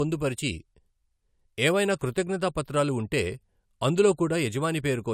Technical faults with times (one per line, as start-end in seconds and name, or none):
0.00-5.13 low-bitrate audio saved at a high bitrate